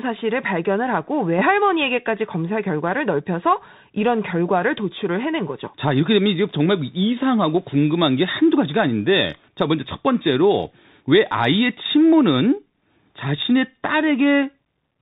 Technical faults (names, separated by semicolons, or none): Bluetooth CVSD headset codec